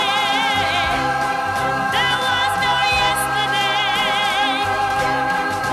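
The signal carries no audible technical faults at any point.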